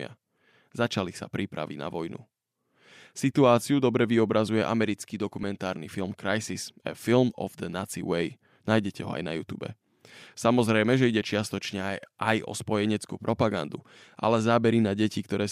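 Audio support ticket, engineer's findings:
Lost LE Audio frames at 5.43 s: brief noisy smear about 7.5 ms long in the speech, fitting one dropped 7.5 ms frame. LC3 decoder concealment repeats the previous spectrum with randomised signs, so the gap is covered by a short burst of texture and isn't silent. Link drop between source and sink is the probable component. Light breathy grain on the surrounding speech is likely from the LC3 compression.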